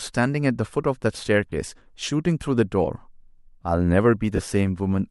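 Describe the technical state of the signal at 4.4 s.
Lost LE Audio frames affect the speech from 4.36 to 4.39 s. About 30 ms dropped out, which fits three 10 ms LC3 frames. The decoder refilled the gap by repeating the last spectrum with scrambled signs and fading it. The result is a brief noisy smear before normal sound resumes.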